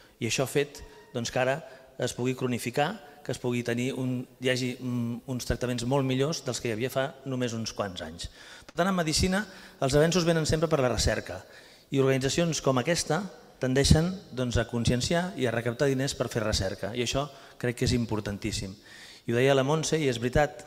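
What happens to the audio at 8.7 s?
A burst of packet loss runs from 8.69 to 8.77 s. Several consecutive packets failed to arrive in time, so the receiver bridged the gap by extending the last sound it had and fading it down over roughly 53 ms. This is heard as a brief held, dulling tail rather than silence. Playback then picks up further along, with about 60 ms of the original audio skipped, so the sound jumps slightly forward.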